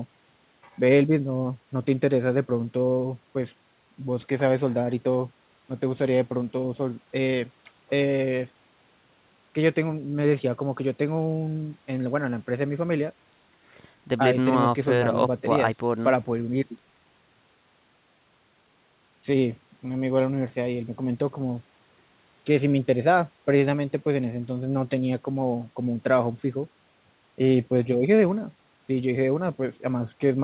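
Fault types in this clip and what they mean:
No fault types are present in this clip; the speech carries nothing above 4 kHz, which fits a narrowband telephone-style call path such as G.711.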